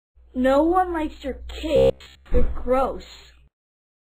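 Robotic sound from repeated short buffers runs from 1.76 to 2.26 s. The sound turns into a rigid, metallic buzz at a steady 66.7 Hz across the whole stretch. This likely comes from a 15 ms block replayed over and over while the fresh audio was skipped.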